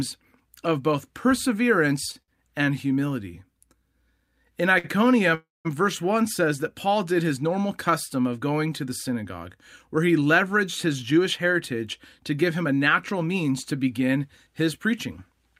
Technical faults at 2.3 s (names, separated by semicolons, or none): short stall from a late packet